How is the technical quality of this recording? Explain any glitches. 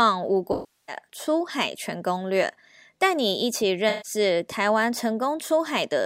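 The quality suffers from two dropouts caused by AAC frame loss with concealment. Compressed frames failed to reach the decoder, which patched the gaps by reusing the last good spectrum. From 0.52 to 0.96 s the speech turns into a smeared, noisy patch lasting about 0.36 s. From 3.89 to 4.11 s a shorter 0.15 s stretch goes briefly phasey and blurred where the decoder guessed the missing audio.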